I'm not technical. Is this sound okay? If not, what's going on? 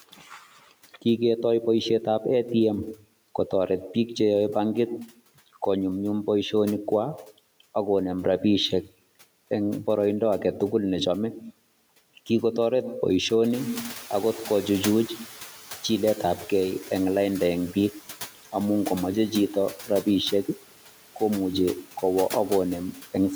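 No. Two things are going on.

Throughout the recording, you can hear noise suppressor artifacts. A noise-reduction filter keeps turning the background noise down between the words and letting it back up under them. So the background seems to pump in and out. The leftover noise can warble or flutter, and the voice can sound a bit thin or watery.

Around 13.5 seconds, the room suddenly gets noisier. Then comes a noise suppressor catching up. The filter hasn't yet noticed the louder background, so from 13.53 to 15.56 seconds the noise comes through more strongly. Over those two seconds it gradually fades down as the filter adjusts, settling just before "jiletabge eng lainda en". The room noise itself is simply part of the recording.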